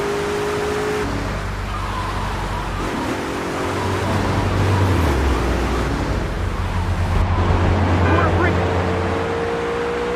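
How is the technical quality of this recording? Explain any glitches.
The recording has one clear fault, near the end. From 7.22 s to 10.16 s, de-emphasis is applied wrongly: a treble cut that should only undo pre-emphasis hits audio that never had it, or is applied a second time, tilting the response down to about 11 dB lower at 10 kHz than at 1 kHz. The sound turns dull and muffled. A spectrogram shows the upper bands fading smoothly from 7.22 s on, while the waveform keeps its overall shape.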